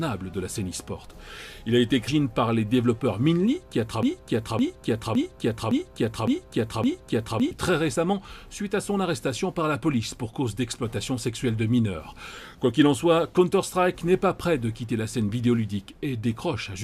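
At 2.07 s there's a quick blip, a classic case of damaged data in the compressed stream. Bad bytes made the decoder choke on a frame and scramble to resync. The same glitch happens again at 7.94 s.

From 4.03 to 7.51 s there's a broken-record loop, where a 0.56 s fragment repeats back to back six times. Most likely the player or stream stalled and kept re-sending the last chunk it had, so whatever should have played there is gone.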